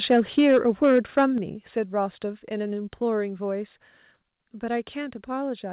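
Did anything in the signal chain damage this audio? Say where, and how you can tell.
Yes. Microphone overload hits the converter stage from 0.1 to 1.25 s. The loudest syllables turn harsh and crackly, with peaks driven about 4 dB past full scale, likely from excessive input gain. On the waveform, around one sample in twenty sits flat against the rails, and the spectrogram shows broadband splatter above each clipped peak.

Microphone volume stepped down, applied in call processing, drops the level abruptly at 0.39, 1.38, 2.4 and 3.42 s, by about 2, 6, 1 and 1 dB. This is likely the call software's gain control reacting to the clipping. The waveform envelope forms stair-steps, and the spectrogram, empty above 4 kHz as fits G.711 mu-law, dims evenly across its band at each step.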